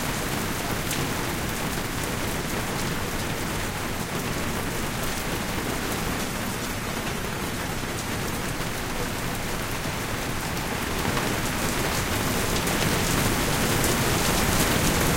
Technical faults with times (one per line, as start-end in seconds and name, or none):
6.08-8.49 call bitrate drop